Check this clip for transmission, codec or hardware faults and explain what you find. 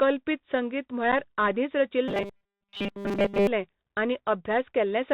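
Three faults are audible in this speech clip: a narrowband Bluetooth codec throughout, one brief dropout, and a stretch of robotic buzzing.

Throughout, the audio has passed through a Bluetooth CVSD headset codec, which sends one up-or-down bit per sample with an adapting step, consistent with a 64 kbps link. Nothing above 4 kHz survives, sibilants turn scratchy, loud bright moments distort, and a granular hiss sits underneath.

At 1.12 s there is unconcealed Bluetooth headset packet loss. About 7.5 ms of audio went missing, which fits a couple of lost packets, and nothing was substituted to cover the gap. The result is a short hole with abrupt edges, and the speech returns briefly quieter.

From 2.08 to 3.47 s the sound turns robotic, likely from repeated short buffers, where audio arrived too seldom and the last few milliseconds were replayed while most of the real audio was skipped. 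The 5 ms repeat imposes a rigid 200 Hz metallic buzz that only loosely follows the speech.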